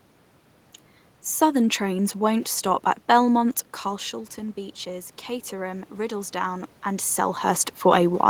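From 3.83 to 7.49 s the speech and room noise swell together by about 5 dB: automatic gain rising to offset input that dropped about 11 dB.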